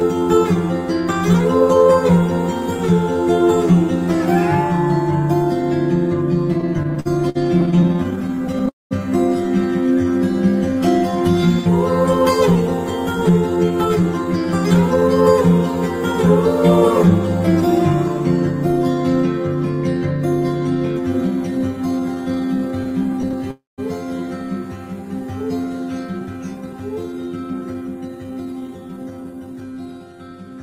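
A channel delay of roughly 10 ms, summed to mono, runs through the whole clip as comb filtering. Fixed notches starting around 40 Hz make the sound hollow and phasey.

From 6.53 to 8.69 s, packets kept arriving late and the jitter buffer ran dry about thirty times. The result is repeated stalls (stutter): 0.38 s of continued sound, gaps up to 57 ms, nothing lost, and a dragging, stuttering delivery.

Overlapping this, from 7.97 to 10.74 s, the buffer rebuilt its reserve with a jitter buffer slow-down, adding 99 ms by repeating pitch periods. The audio runs at 97% speed with the same pitch.

At 8.69 to 8.93 s, packets were likely held up on the path, causing a call audio freeze. The last sound is stretched and fades, then there is about 190 ms of silence, inserting a 220 ms gap before the audio resumes where it stopped.

From 13.29 to 15.38 s, an overfull buffer triggered a jitter buffer speed-up, cutting roughly 200 ms of pitch periods. 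The audio runs at 111% and sounds hurried.

A second slow-down from 22.00 to 23.43 s adds 103 ms and drops the speed to 94%. Within it, from 22.84 to 23.42 s, eight further stalls of up to 15 ms add 91 ms of concealment and a stutter.

At 23.51 to 23.80 s, another call audio freeze, likely from delayed packets, fills 270 ms. The sound fades and then gives about 170 ms of silence.

Finally, from 26.07 to 29.61 s, a jitter buffer speed-up trims roughly half a second, pushing the audio to 114% with a rushed, clipped pace.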